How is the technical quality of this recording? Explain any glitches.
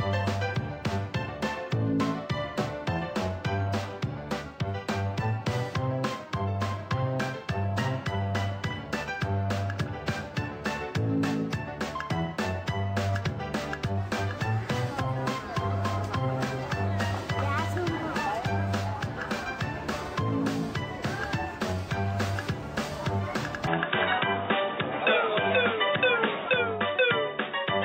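The technical quality drops sharply near the end. From 23.67 s to the end of the clip, there is what sounds like an input switched to a poorer device. The recording system has likely changed its source mid-take to a lower-grade microphone or a headset's call profile, which passes a much narrower band. Nothing is left above 3.8 kHz, so the sound turns dull and boxy at once, with no gap at the changeover and no real jump in level. A faint new background noise also sits well under the signal.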